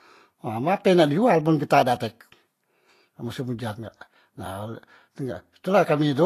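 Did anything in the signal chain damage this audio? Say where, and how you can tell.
Yes. The damage sits at the codec stage, likely from Vorbis compression at a low setting. Throughout the speech, nothing reaches above 14.2 kHz, and the treble beneath that cut-off has a hissy, grainy texture rather than clean detail. Consonant attacks sound smeared. The encoder has quantised the high-frequency residue so coarsely that fine structure is replaced by noise of similar energy, which fits a bitrate in the region of 35 kbps.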